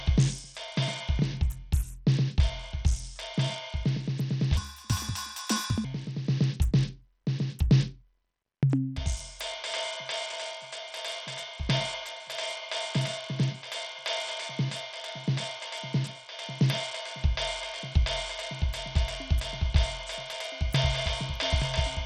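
Throughout, the music likely went through Bluetooth SBC compression with too few bits, fitting roughly 80 kbps, so the treble flickers away under gritty noise. From 4.57 to 5.85 s, a section was likely played at the wrong speed, 1.62 times too fast, lifting the music about seven semitones and making it hurried.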